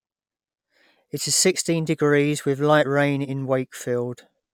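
Nothing stood out on listening to this speech recording.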